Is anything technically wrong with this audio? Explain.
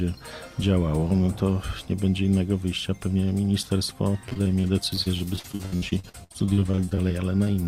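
Yes, there's repeated packet loss, giving a robotic sound, from 4.29 to 7.48 s. Dozens of short dropouts, up to 67 ms each, get patched by stretching the previous sound, so it turns choppy with pieces missing.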